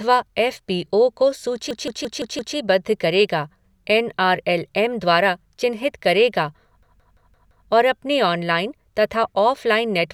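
At 1.71 s and again at 6.83 s the system briefly froze while the audio hardware kept replaying its ring buffer, a system hang loop. Each time, a segment of about 171 ms repeats five times at roughly 5.9 per second, lasting until 2.56 s and 7.68 s. The loop length fits an 8192-sample buffer, so this is a machine-gun stutter rather than a buzz. The second stutter falls between "एम द्वारा चिन्हित करेगा" and "और अपने".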